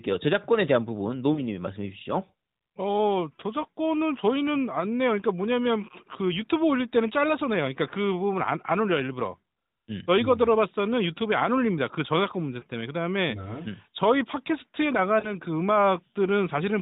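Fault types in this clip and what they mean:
Lost AMR speech frames: three frames failed their checksum, so the decoder reused the previous pitch and vocal-tract settings at reduced gain, giving brief warbling dips.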